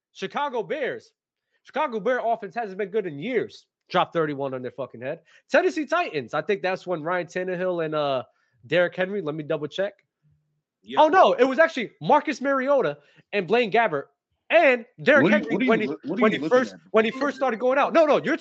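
From 0.39 to 3.37 s, automatic gain rising lifts speech and background together by about 7 dB, a slow swell rather than a sudden jump.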